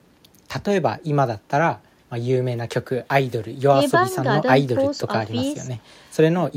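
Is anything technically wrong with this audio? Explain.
No, nothing is technically wrong with this audio.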